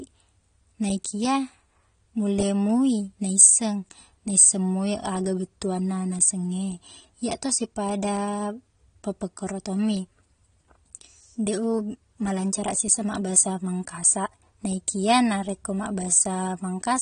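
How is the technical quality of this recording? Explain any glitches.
The recording's technical quality is poor because of plainly audible compression damage. Throughout, likely AAC compression at a low bitrate, around 32 kbps, quantises the spectrum coarsely and removes everything above 9.7 kHz, leaving the speech dull, smeared and fizzy.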